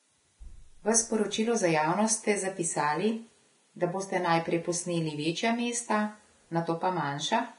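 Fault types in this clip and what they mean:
Vorbis compression: The speech sounds hissy and grainy, with its tones roughened and its onsets smeared, and nothing is heard above about 10.6 kHz throughout. This is likely heavy Vorbis coding at a rate near 30 kbps, where the coarsely quantised upper band is replaced by noise of similar energy. A plain low-pass filter would leave the remaining treble clean, whereas here the band below the cut-off is itself turned to grit.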